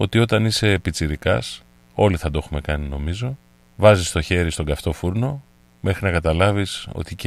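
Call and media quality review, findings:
Mains buzz under the speech, steady for the whole clip: raspy 60 Hz buzz with harmonics into the kilohertz range, about 35 dB below the signal. Switching spikes from a dimmer or rectifier, not a smooth hum.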